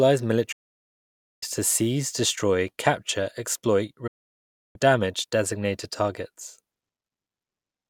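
At 0.52 s the speech cuts out in a digital broadcast dropout. The receiver lost the signal or rejected corrupted frames and muted, fading down in about 8 ms, until good frames resumed at 1.43 s with "to seize destroy capture". A second hole runs from 4.07 to 4.76 s, between "seize destroy capture exploit" and "damage designated targets". On a waveform and spectrogram each gap is a flat, empty block with near-vertical edges, and the programme sent meanwhile is simply gone.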